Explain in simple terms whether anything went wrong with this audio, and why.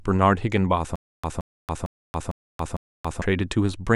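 From 0.96 s to 3.22 s the speech catches and repeats: a 0.17 s snippet plays five times, each followed by about 0.28 s of dead silence, so a burst returns every 0.45 s. This stutter with silent gaps likely comes from playback stalling, replaying its last fragment and running empty, losing the speech meant for that stretch.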